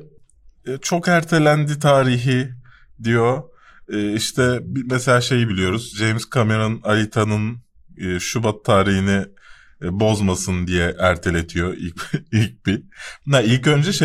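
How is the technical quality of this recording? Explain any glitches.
The recording has one recurring glitch: clock slip clicks running through nearly the whole speech clip, from about 0.36 s to 13.36 s. You get a faint tick roughly every 0.7 seconds, around twenty in total, each from a single sample. The likely cause is two devices on unsynchronised clocks, drifting apart by something like 30 ppm. Each time the offset adds up to a full sample, one gets dropped or doubled, leaving that small regular click.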